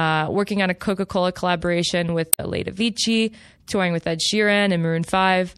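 Right from the start there's a watery, swirly quality with dull treble, most likely MP3 compression, and the damage fits a low bitrate around 64 kbps. At 2.29 to 2.40 s, damaged data in the compressed stream throws the decoder off its frames, giving a brief garbled burst before it locks back on.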